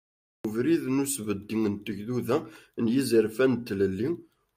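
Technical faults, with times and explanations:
0.00–0.45 s, cut-off start: capture began late, so speech appears mid-sound at 0.45 s from digital silence, a flat line ending in a sharp vertical edge with no attack.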